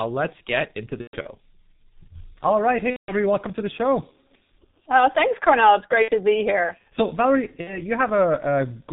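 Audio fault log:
throughout G.723.1 codec: The speech is muffled and hoarse, with nothing above 4 kHz and smeared consonants. The voice model updates only every 30 ms frame, and the heavy coding damage fits the codec's 6.3 kbit/s mode.
1.01–1.28, 2.90–3.12, 6.02–6.10, 7.61–7.79 VoIP packet loss concealed by the speech codec: The speech stretches into a buzzy tone or coloured noise that fades, then stays weak and distorted briefly afterward. The decoder is extrapolating from its last pitch and filter to cover missing frames, about 180 ms at worst near 3.0.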